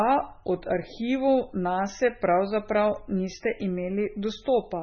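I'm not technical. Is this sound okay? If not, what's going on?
No. The speech was likely squeezed hard by MP3 compression, which throws away detail to save space. For the whole clip nothing above 6.6 kHz remains, so it sounds dull and muffled, with a watery, swirling texture and smeared consonants.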